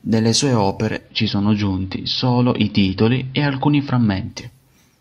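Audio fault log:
0.89–4.46 s, digital radio blending to analogue: speech dulls, faint hiss and about 1 dB level shift, as receiver cross-faded over 0.25 s to AM and back.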